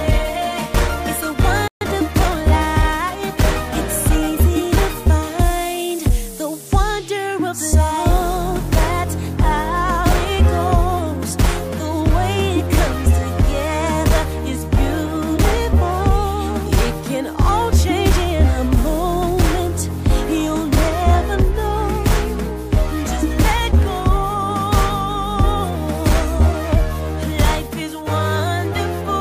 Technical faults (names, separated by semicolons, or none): playback stall; time-compressed catch-up